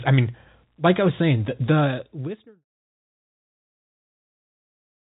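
No technical faults detected in this speech clip, which is band-limited below 3.8 kHz as telephone-coded audio and fades out smoothly from around 1.5 s to 2.65 s.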